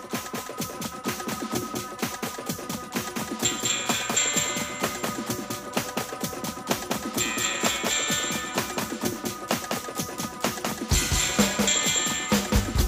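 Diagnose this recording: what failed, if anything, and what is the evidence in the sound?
A doubled audio track runs through the whole recording: a second full-band copy trails the original by roughly a fifth of a second, a few dB quieter, with no decay or room colouring. Likely the signal was captured twice, through a slower second path in the driver or buffer stage.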